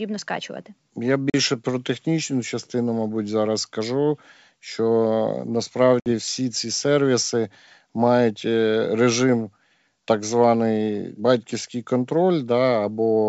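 Speech over a G.722 wideband link shows packet loss on an ADPCM call: silent gaps at 1.30–1.35 s (40 ms) and 6.00–6.07 s (60 ms) cut hard across the spectrogram, with slightly distorted onsets as the predictor resynchronises.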